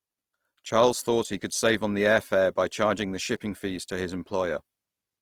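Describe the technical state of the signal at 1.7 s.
At 1.7 s the speech carries Opus compression damage present across the whole clip. It sounds grainy and rough rather than swirly, which points to a likely music-mode encode near 24 kbps, where starved bands are filled with folded or noise content.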